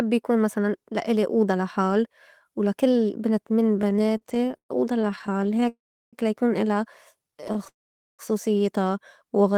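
Right after "ولا كل بنت من", from 3.79 to 5.69 s, there's a run of repeated stalls (stutter): packets kept showing up late, the jitter buffer kept draining, and the receiver stretched the last sound, with gaps up to 120 ms making it drag. Then from 5.69 to 6.15 s comes a call audio freeze, likely a longer hold-up that emptied the buffer. The last sound fades into roughly 360 ms of silence before "لا يكون إلا" picks up where it left off. After "لا يكون إلا" the stutter returns, lighter, from 7.28 to 7.68 s with gaps no longer than 28 ms. It's followed by another freeze from 7.68 to 8.21 s, likely the same kind of delay, with about 460 ms gone quiet.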